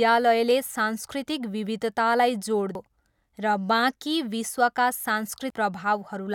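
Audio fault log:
2.75 s and 5.50 s: audio missing between chunks. The speech jumps forward abruptly, dropping around a third of a second each time, with the two sides butted together without a gap. The likely cause is the recording being processed in 3.0 s chunks, losing audio at each handover.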